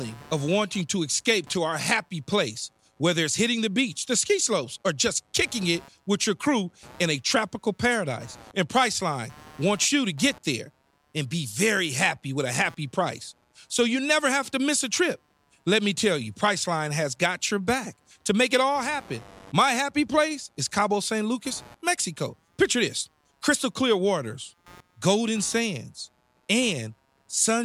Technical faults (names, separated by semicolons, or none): computer activity noise